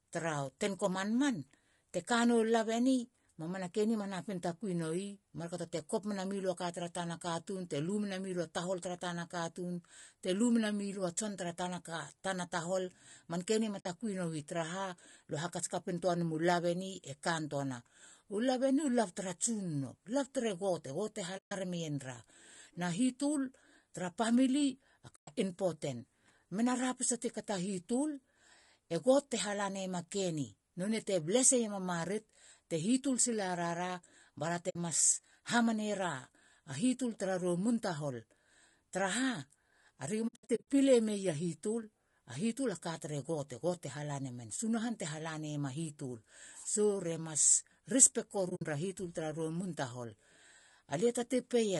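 Throughout, the speech sounds rough and grainy, with noise filling the gaps between harmonics and a thin, synthetic top band. That plainly audible damage is likely low-delay AAC compression (AAC-ELD) at 32 kbps. Its short frames resolve pitch poorly, unlike the warbly artefacts of ordinary AAC.

AAC frame loss with muting leaves soft-faded holes rather than repeated sound. Lost frames were zeroed and the overlapping windows faded the audio out and back in. The holes fall at 13.79 s (60 ms, after "manke ni ma"), 21.37 s (140 ms), 25.15 s (120 ms, before "impoten mena ra pise") and 34.69 s (60 ms). At 40.27 s, 280 ms of drops are scattered across 0.4 s, the longest run around 70 ms. At 48.49 s, 100 ms of drops spread over 0.16 s before "hitul tara ra". The gap lengths fit frames of roughly 20 ms each.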